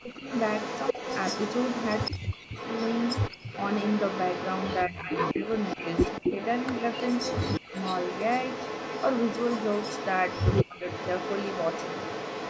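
From the start and through the whole clip, an echo leak trails the voice by 163 ms, roughly 10 dB down, likely loudspeaker pickup the echo canceller failed to remove; unlike reverb, it is a distinct delayed copy. Speech suppressed in double talk cuts the voice by twenty to forty decibels at 0.0–0.25 s, 2.18–2.54 s, 4.89–5.11 s, 7.6–7.66 s and 10.63–10.82 s, likely the canceller ducking both talkers at once; these are brief gated dips, not dropouts from lost packets.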